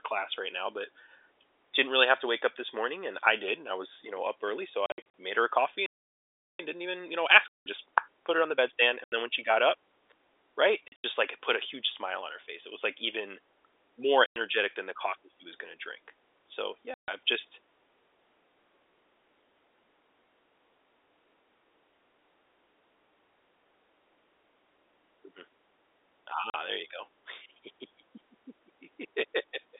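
Phone-line speech here, narrowband G.711 with the usual roughly 300 Hz to 3.6 kHz band, and the main problem is packet loss filled with silence. Hard-edged dropouts appear at 4.86 s (about 180 ms of holes spread over 280 ms, between "know up early so" and "made her a coffee"), 7.48 s (180 ms), 9.04 s (80 ms), 10.88 s (120 ms in chunks, right before "just like it put"), 14.26 s (100 ms), 16.94 s (140 ms, just ahead of "I've just") and 26.50 s (40 ms). Every hole is a multiple of 20 ms, which fits 20 ms packets. The receiver simply left gaps where packets went missing instead of concealing them. On top of that there's a playback stall from 5.86 to 6.59 s, where the audio stops dead mid-flow for about 0.73 s. That's most likely the player running dry on buffered data or its thread getting blocked. Right after it, from 6.59 to 9.59 s, you get time-compressed catch-up. The player works off the backlog by snipping out small slices and cross-fading over the joins, so the speech runs about 1.15 times fast at normal pitch. 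The dropouts at 7.48 and 9.04 s land inside that hurried stretch.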